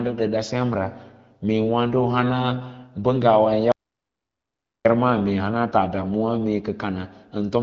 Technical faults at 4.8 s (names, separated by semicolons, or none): audio dropout to silence